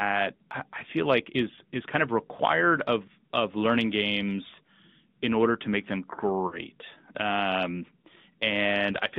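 Throughout, the speech sounds thin and buzzy, confined to 150 Hz to 3.7 kHz, with a plainly synthetic edge. This is the AMR narrowband mobile codec, at a rate that fits a mode around 10 kbps. From 6.48 to 6.59 s, just after "order to make them", the sound smears and fades, then returns rough. These are lost AMR speech frames, which fits two frames missing. The decoder stretched the last good settings with falling gain.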